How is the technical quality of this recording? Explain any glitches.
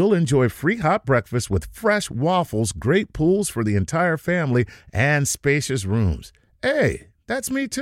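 No technical glitches are audible.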